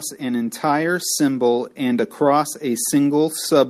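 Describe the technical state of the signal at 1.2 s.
At 1.2 s the speech is in the middle of an automatic gain rising, which runs from 0.18 to 1.63 s. The gain control judged the input too quiet and raised its level slowly. Voice and background swell together by about 3 dB.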